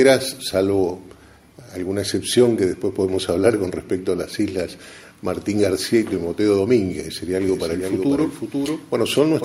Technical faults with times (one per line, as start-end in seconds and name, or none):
7.46-9.44 doubled audio track